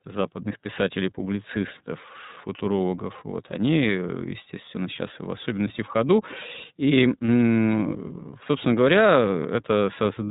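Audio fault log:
Throughout: iLBC codec. Nothing above 4 kHz gets through, so the speech sounds narrowband and boxed in. The coding damage is plainly audible as a rough, slightly synthetic grain on the speech. This comes from each frame's excitation being coded on its own with no help from the previous frame. The result is clear but coarse. The sound fits the 13.33 kbps mode, which uses 30 ms frames.
7.26–7.28 s: lost iLBC frames. The speech briefly turns into a short held, faintly buzzy vowel-like sound. The decoder had nothing for that stretch. It repeated the last pitch cycle blended with noise to cover the hole. The gap fits one lost 30 ms frame. Since iLBC frames stand alone, normal speech returns right after, with no lingering smear.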